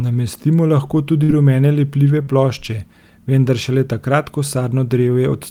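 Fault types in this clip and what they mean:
Burst of packet loss: lost or late packets near 1.23 s were bridged by 52 ms of fading continuation, then 60 ms skipped, longer than a smear.
Short concealed packet loss: at 2.23 s, 43 ms was synthesised from the preceding sound and blended back, a quick smear, no audible jump ahead.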